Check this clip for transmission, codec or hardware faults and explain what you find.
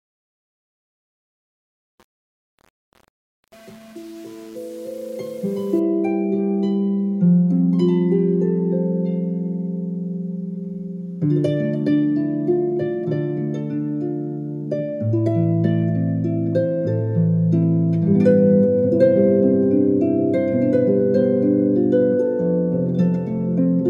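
One fault is present, confined to the opening fade-in.

Truncation distortion on a fade runs from 0.0 to 5.79 s, across the whole quiet start of the fade-in. The gain stage applying the fade keeps too few bits and adds no dither, and the coarseness fits a 7-bit path. At the lowest levels the waveform collapses into a handful of square steps, so the sound comes in gritty until it rises clear of the smallest step.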